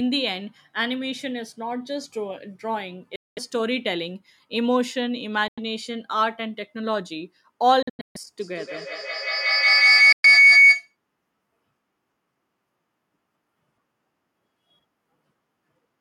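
Speech with two kinds of fault. Four silent gaps cut the audio: 3.16 to 3.39 s, 5.48 to 5.59 s, 7.83 to 8.16 s, and 10.12 to 10.26 s. In each, the sound stops and resumes as though it had kept playing underneath. This is likely Bluetooth dropout, where packets fail to reach the headphones in time and the output is muted until good ones arrive. The gap at 7.83 s is a cluster of short holes spread over about a third of a second rather than one clean break, the longest about 0.14 s. On a waveform each gap shows as a flat line, and on a spectrogram as a blank vertical band across all frequencies. From 8.41 to 10.96 s there is feedback howl, where the same call is playing on a nearby device and its loudspeaker is picked up by the microphone again, gaining level on each pass. It narrows to a tone around 2 kHz, with the loop repeating roughly every 150 ms, and peaks about 11 dB above the speech. 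On a spectrogram it shows as a bright horizontal line near 2 kHz. On the waveform the envelope swells until the howl ends, with the 10.12 s dropout cutting through it.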